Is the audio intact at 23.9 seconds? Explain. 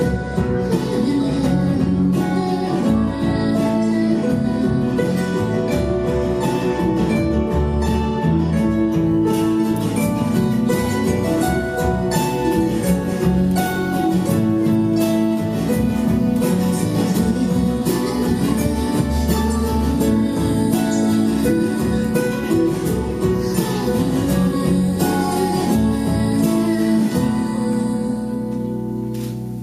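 No. From 9.33 s to the end, the sound is thin, bright and sibilant, with treble lifted by about 10 dB at 10 kHz relative to 1 kHz. This is pre-emphasis left on: an FM-style 50 µs treble boost was applied without the matching de-emphasis cut.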